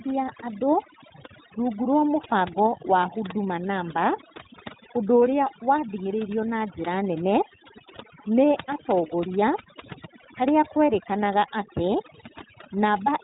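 Speech, and two faults run through the whole clip. The first is overdone noise removal. The background between phrases drops, broken up into small twinkling specks. The quieter parts of the voice are being cut along with the noise. The specks are what set this apart from a plain gate or expander, which would shut the gap cleanly rather than leaving isolated tonal blips where single bands flick open and shut. The second fault is iLBC codec damage, and it is plainly audible. Nothing above 3.8 kHz gets through, and the speech has a slightly rough, synthetic grain. That roughness fits iLBC's independent 20 ms frames at about 15.2 kbps. It differs from a simple low-pass filter, which would dull the top end without adding that rough, synthetic texture to the voice.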